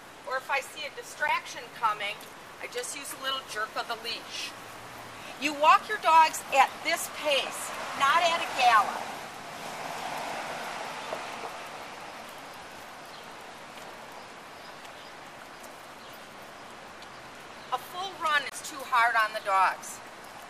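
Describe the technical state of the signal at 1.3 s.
At 1.28 s, an 11.6 ms block of digital silence, fitting an unfilled 512-sample buffer, cuts abruptly to silence: a sharp tick, not a faded dropout.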